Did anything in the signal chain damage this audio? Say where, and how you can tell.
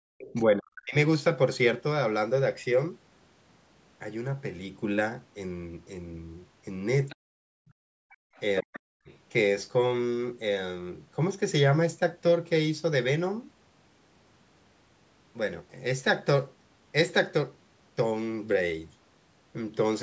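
Yes. The damage happens in the call processing, at the echo canceller. Between 0.0 and 0.13 s, and again from 7.83 to 8.34 s, the room sound drops out abruptly, by about 40 dB and then about 33 dB. It comes back when the canceller releases. This is background gated by the echo canceller: it clamped the microphone hard while the loudspeaker played.

A faint second voice comes through from 0.18 to 0.42 s and across 7.09 to 9.13 s. It sits around 20 dB below the main speech. This is the other side's voice leaking through. The likely cause is loudspeaker output that the echo canceller failed to subtract from the microphone signal.

The main speech dips sharply at 0.33 to 0.95 s, 7.22 to 7.55 s and 8.62 to 9.1 s, falling by roughly 40 dB. These dips overlap the leaked voice. This is speech suppressed in double talk, likely because the canceller could not separate the talker from the echo and attenuated both.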